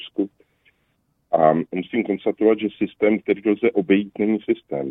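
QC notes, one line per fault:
No faults found. Nothing in the audio calls for a QC note.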